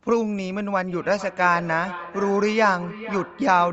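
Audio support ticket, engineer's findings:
Feedback echo between two devices from 0.88 s to the end. Sound returns roughly every 0.4 s, thinner and more ringing on each pass, peaking about 15 dB under the direct speech. Probably two endpoints in the same room on one call: one plays the far side's mic, that mic picks it up again, and neither echo canceller touches audio from the other device. Top end stops around 8 kHz, consistent with a wideband Opus call.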